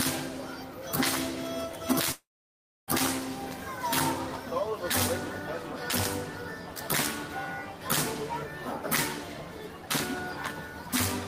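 From 2.12 to 2.90 s the audio breaks off: a brief fading buzz, then about 0.62 s of silence, resuming with roughly 0.76 s lost, likely a long network dropout.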